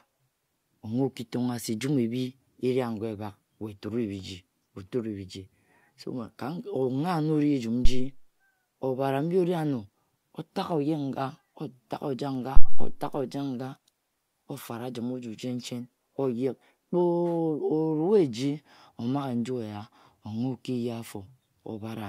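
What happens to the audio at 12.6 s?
At 12.57 s a phantom power thump hits the speech and settles by 12.99 s. A supply voltage switched on or off on the live input sends a DC step through the coupling capacitors, heard as a deep thud that then dies away with a decay of roughly 95 ms. The waveform shows a large one-sided swing, and the spectrogram shows a bright band of energy at the lowest frequencies.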